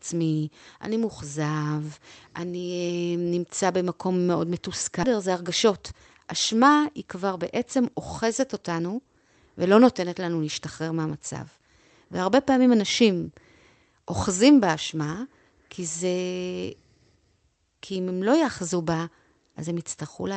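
At 5.03 s the speech jumps abruptly forward, with no gap or fill, as if about a second of talk had vanished. This is a skip ahead: a stretch of audio was discarded, in transit or by an overflowing jitter buffer, while later audio was already queued, so the two sides join almost directly.

From 5.13 to 6.22 s, and again from 6.83 to 9.06 s, the speech runs hurried at about 110% speed with unchanged pitch. This is jitter buffer speed-up: with excess audio queued, the receiver repeatedly trimmed short pitch-period pieces, roughly a tenth of a second in the first stretch and about a fifth in the second, to pull the delay down. Throughout, the call path's Opus coding noise and cut-off at 8 kHz remain audible, which fits a bitrate around 32 kbps.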